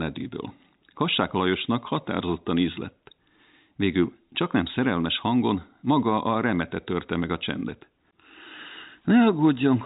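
There are no technical faults to describe in time order; the speech simply carries the narrow band of G.711 telephone coding, with nothing above 3.8 kHz.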